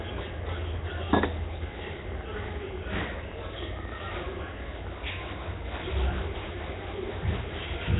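Nellymoser compression runs from start to finish: the audio has the rough, hissy halo and smeared, underwater character of the old Flash microphone codec, most likely Nellymoser Asao. Nothing survives above 3.8 kHz, and the damage is heavy, which fits a bitrate near 16 kbps. The codec spends a fixed, small bit budget on each short block, so weaker bands get no bits and are replaced with noise. That noise fill is the grainy hiss sitting on the sound.

A train of clicks runs from 1.64 s to 4.88 s. About 11.5 sharp, similar pulses a second, roughly forty in all, tick over the sound at an uneven pace. They continue through quieter moments and peak at around 5 dB above the surrounding level. An irregular burst of pulses like this is likely interference from nearby equipment or a faulty connection or power supply, which breaks into the signal path for a few seconds and then stops.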